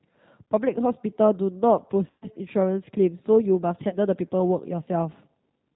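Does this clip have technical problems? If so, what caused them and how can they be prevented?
Yes. The whole clip is carried by the G.729 codec (the G.729A variant) at 8 kbit/s, and the damage is plainly audible. G.729 rebuilds speech from a vocal tract filter, a pitch estimate and a few pulses per frame rather than sending the waveform itself, so the result is intelligible but rough and a bit synthetic. Nothing above 4 kHz gets through, which leaves the speech sounding boxed-in. To avoid this, route calls over a wideband codec such as G.722 or Opus instead of narrowband G.729.

There are also two spots of VoIP packet loss concealed by the speech codec. The first runs from about 2.10 to 2.28 s, with roughly 120 ms of audio missing, which fits four lost 30 ms packets. The second runs from about 3.89 to 3.97 s, with around 30 ms gone, consistent with a single packet. In both cases the decoder filled the gap by extending the last pitch and filter settings at falling gain, so the speech smears into a buzzy tone or coloured noise that fades. 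Because each frame builds on the one before, the speech stays weak or distorted for a moment after real packets resume, which is why the disturbance outlasts the actual loss. To prevent this, fix the network path with QoS and less congestion, and add forward error correction or packet redundancy.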